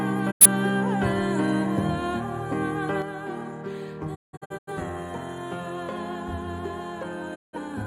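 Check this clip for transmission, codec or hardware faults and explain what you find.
Three digital broadcast dropouts and a lasting level loss consistent with one channel dropping out.

Digital broadcast dropout: at 0.30 to 0.46 s, 4.14 to 4.72 s and 7.34 to 7.58 s the sound fades out over about 20 ms and falls silent. The first gap loses about 85 ms. The second breaks into several short holes spread over about half a second, with the longest about 170 ms. The third loses about 170 ms. The receiver muted while frames were missing or corrupt, and whatever was sent in those gaps is gone. The gap lengths point to two, eight and four lost frames.

One channel drops out: from 3.02 s to the end, the level falls abruptly by about 6 dB and stays down. The likely cause is one stereo channel going missing, so the mono sum carries only half the shared material, and anything present only in that channel vanishes.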